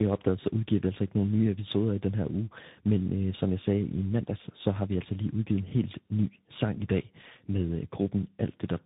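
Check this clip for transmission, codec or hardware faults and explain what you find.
Yes, there is one fault, present from start to finish: tandem speech coding. The speech sounds like it passed through a low-rate codec such as G.729A and was then re-encoded by a delta-modulation coder such as CVSD, with a G.711 stage likely between them. Each coder worked on the previous one's artefacts, so the speech is rough, muffled and warbly. On a spectrogram, nothing appears above 3.8 kHz, and the harmonics look smeared and patchy.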